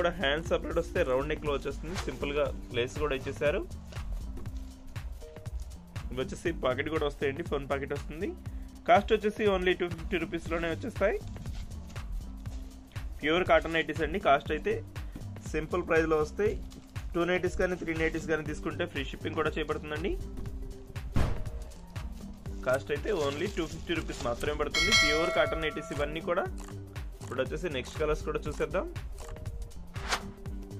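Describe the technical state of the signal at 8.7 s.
A chunk-ordering fault occurs here: between 8.68 and 8.78 s, chunks out of order. One block of audio, about 46 ms long, was delivered or written one chunk late, so it plays after the chunk that should have followed it. No audio is missing, but the two blocks are swapped, leaving three abrupt joins where the waveform does not line up. The result is a brief jumbled, garbled moment.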